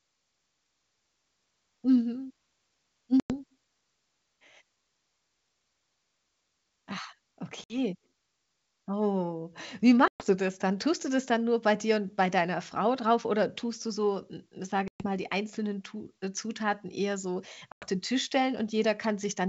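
Packet loss on an ADPCM call cuts into this G.722 wideband speech at 3.20 to 3.34 s, 7.64 to 7.77 s, 10.08 to 10.26 s, 14.88 to 15.06 s and 17.72 to 17.86 s. Each is a hard-edged silent hole of about 60 to 120 ms, pointing to a handful of packets gone. The decoder's predictor and step size lose track of the sender's, so speech resumes slightly distorted before settling.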